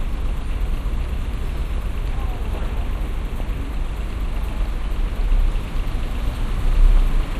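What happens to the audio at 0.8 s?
At 0.8 s the sound is dull and muffled, with a gurgling, grainy roughness, and that character runs through the whole clip. The likely cause is MP2 compression at a low rate, which fits roughly 80 kbps: upper sub-bands drop out and flicker while the remaining bands are coarsely quantised.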